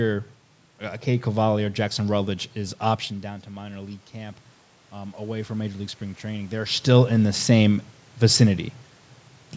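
From 2.56 to 6.74 s the automatic gain rises. The input falls by about 14 dB, around when the talker moves away near 3 s, and the control slowly adds about 6 dB of gain, so the voice and the room noise swell together.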